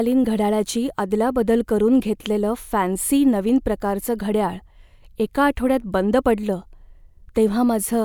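Nothing stood out as a technical fault when listening to the speech in the clip.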